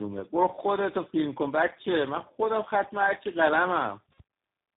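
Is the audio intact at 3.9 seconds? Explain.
No, at 3.9 s the speech is still carrying tandem speech coding, as it does throughout. It sounds like four speech coders in a row, each re-coding the last one's damage, so it's rough, warbly and muffled, with nothing above 3.7 kHz.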